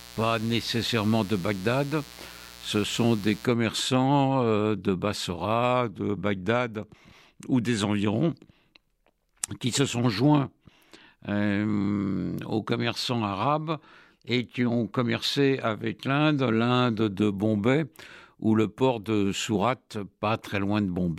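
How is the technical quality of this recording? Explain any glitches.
The recording has one technical fault, at the very start. From 0.0 to 3.45 s there is mains buzz. A dimmer, rectifier or poorly shielded lead let sharp switching spikes from the 60 Hz supply into the signal, two per cycle. Their harmonics stack up from 60 Hz into the kilohertz range, giving a steady, raspy buzz rather than a smooth hum. It sits about 20 dB below the speech until it stops.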